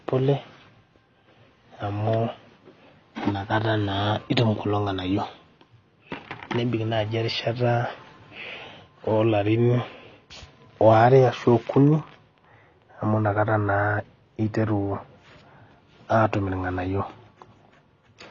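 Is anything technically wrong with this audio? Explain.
Yes. AAC compression runs throughout the speech: nothing remains above about 7.1 kHz, and the sound is dull and smeared with a fizzy, warbling edge on sibilants. This is likely a low-bitrate AAC-LC encode, around 24 kbps, where the encoder drops the top band and coarsely quantises what remains.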